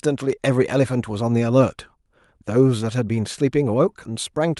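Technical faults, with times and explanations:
No technical faults can be heard in this speech.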